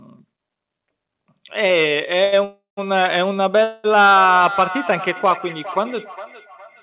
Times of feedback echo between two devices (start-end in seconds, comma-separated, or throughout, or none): 4.07-6.83